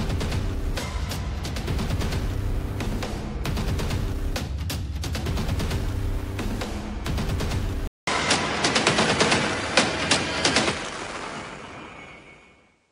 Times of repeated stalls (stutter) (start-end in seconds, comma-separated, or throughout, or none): none